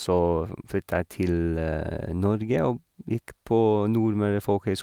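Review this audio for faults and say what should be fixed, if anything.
No faults found in the speech recording and nothing to fix.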